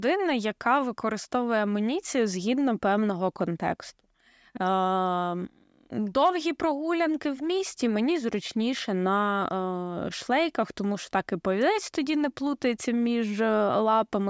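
Nothing in this speech recording shows a technical fault. At no point can any problem with the audio be heard.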